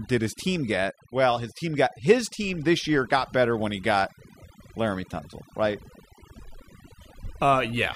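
A mains buzz runs from start to finish. Switching spikes from a dimmer, rectifier or poorly shielded cable have leaked into the signal path, twice per cycle of a 60 Hz supply. That spiky waveform carries a long ladder of 60 Hz harmonics that reaches into the kilohertz range. The result is a steady, raspy buzz under the speech, sitting roughly 35 dB below it.

Overdone noise removal also affects the whole clip. A noise reduction stage was pushed far too hard, so any frequency band that drops close to its noise estimate gets pulled down or switched off entirely. The quieter parts of the speech fall under that threshold and are cut along with the noise. This leaves the gaps almost silent apart from twinkling, chirpy specks.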